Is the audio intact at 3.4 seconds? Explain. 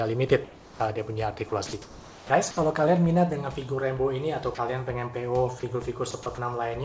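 Yes, the audio is intact at 3.4 seconds, with the call path carrying it through unbroken apart from the expected band limit that leaves nothing above 8 kHz.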